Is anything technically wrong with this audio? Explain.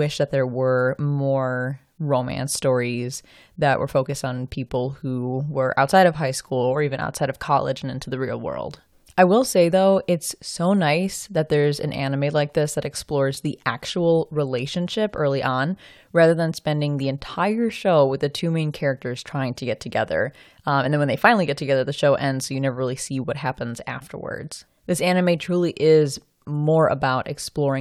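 No, nothing technically wrong can be heard here.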